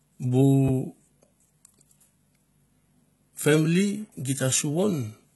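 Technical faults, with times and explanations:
Throughout: HE-AAC compression, likely. The damage is heavy. Treble above a crossover is rebuilt by copying lower bands upward under a coarse envelope, so harmonics misalign and s sounds turn gritty, metallic or lispy. Nothing reaches past 11.8 kHz, which fits a very low rate around 16 kbps.
0.68 to 0.71 s: loud pop. A single sharp pop stands about 10 dB above the speech, which carries on beneath it. A sudden voltage step or pulse, likely from a plug, switch, static or driver glitch, entered the signal and was shaped by the circuits that followed.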